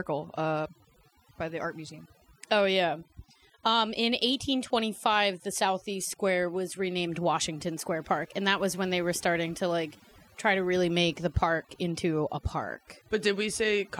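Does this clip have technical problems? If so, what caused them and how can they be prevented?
Yes. Overdone noise removal affects the whole clip. Bands near the reducer's noise estimate were switched nearly off, taking quiet speech detail with them. A spectrogram shows blank gaps dotted with isolated, twinkling specks. Use gentler reduction settings.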